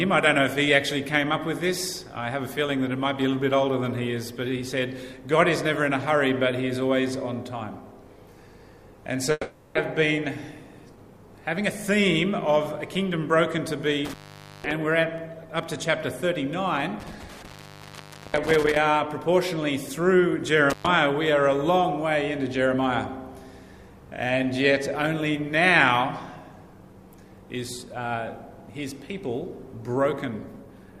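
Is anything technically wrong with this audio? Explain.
Yes. There are two kinds of fault.

From 9.31 to 9.77 s comes what is likely a long network dropout. Audio stopped arriving. The receiver stretched the last sound into a fading buzz or hiss for about 0.44 s, then briefly went silent. Sound resumes with that stretch missing.

Intermittent contact hits three times: 14.05 to 14.71 s, 17.00 to 18.77 s, and 20.70 to 20.87 s. A loose connection briefly opens, for about 0.50, 0.88 and 0.11 s. The sound drops out with crackle at each edge, leaving faint hiss.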